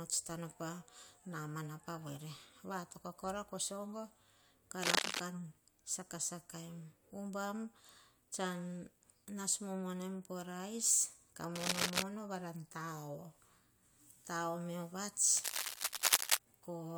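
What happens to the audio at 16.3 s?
At 16.3 s the audio is near the end of a burst of cable scratch noise running from about 15.35 to 16.38 s, just after "me oh vats". The likely cause is a worn cable or connector being moved, its contact resistance jumping erratically as it shifts. Those rapid changes inject dense, irregular bursts of noise into the signal, heard as scratching and rustling laid over the speech and a little louder than it.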